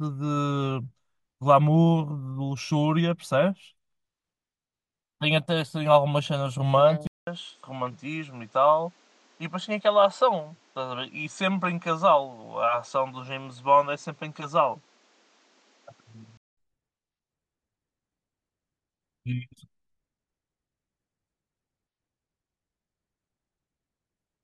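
Input switched to a poorer device, from 7.07 s to 16.57 s. A gap of 200 ms opens at the change, then the speech comes back duller and boxier, with nothing above 8.3 kHz, roughly 5 dB quieter, and carrying a new background noise sitting around 35 dB below the voice. The likely cause is the recording input jumping to a narrower-band microphone. At 16.57 s the fuller, brighter sound returns.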